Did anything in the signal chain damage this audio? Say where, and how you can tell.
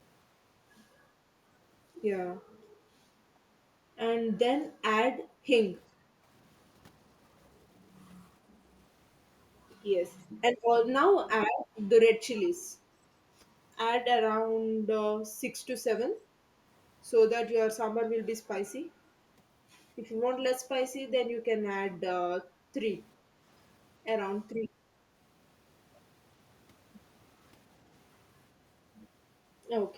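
Yes. Call processing damaged it with background gated by the echo canceller: the room sound dips at 2.65–2.77 s, 5.24–5.46 s (about 13 dB, the deepest), 5.92–6.26 s and 23.18–23.39 s, each lasting tenths of a second. The canceller clamped the microphone hard while the far end played.

An echo leak also sits in call processing: at 12.35–12.5 s a faint delayed copy of the speech appears, about 30 dB down, trailing by 396 ms. It is likely a loudspeaker echo the far end's canceller failed to fully remove.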